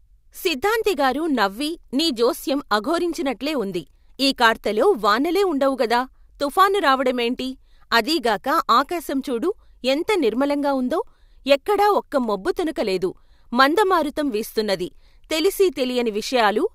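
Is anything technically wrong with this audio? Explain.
Yes. Sample clock jitter runs throughout: timing errors of around a microsecond and a half make hiss about 40 dB down that tracks loud, bright speech, unlike steady background noise, which persists in pauses.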